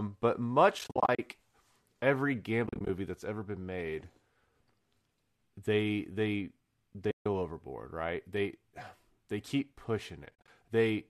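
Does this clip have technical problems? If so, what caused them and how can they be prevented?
Yes. AAC frame loss with muting leaves soft-edged holes at 0.79 to 1.19 s, 2.67 to 2.89 s before "that's ever been made", 7.11 to 7.26 s before "overboard right", and 10.26 to 10.48 s after "they keep". Lost frames were decoded as silence, and overlapping windows fade the sound out and in. The short gaps fit the 10 ms frames of likely low-delay AAC. Adding packet-loss concealment or forward error correction would prevent this.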